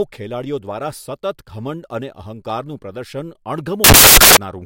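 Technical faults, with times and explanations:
3.84 to 4.37 s, samples built from the wrong bytes: for about half a second the speech gives way to a harsh, loud burst of broadband noise. The bytes making up each sample were joined wrongly, whether offset by one byte, taken in swapped order or read with the wrong alignment. The rapidly fluctuating low-order bits therefore landed in the high-order positions and took over each value, turning the waveform into noise.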